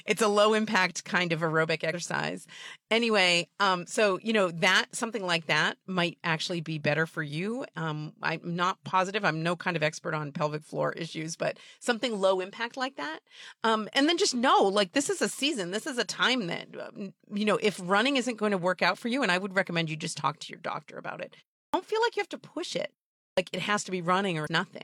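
It's a speech recording with two separate problems. First, there's damaged data in the compressed stream. Right after "impact kind of aerobic" you get a short glitch from 1.90 to 1.95 s, and there's another blip from 24.43 to 24.48 s, about 48 and 56 ms long. In both spots some of the encoded bytes were wrong or missing. The decoder couldn't read those frames cleanly, lost sync, and had to hunt for the next valid frame header, which is where that brief glitch comes from.

Second, there's a clipped start after a pause, and it happens twice near the end. After "your doctor about it" there's a 0.33 s gap, and then "feel like you have" comes in abruptly at 21.67 s with roughly the first 64 ms missing. After "have to push it" and a 0.44 s gap, the next phrase at 23.31 s loses about 62 ms the same way. The output device dozed off during the silence and needed a moment to wake back up, so the onsets got swallowed.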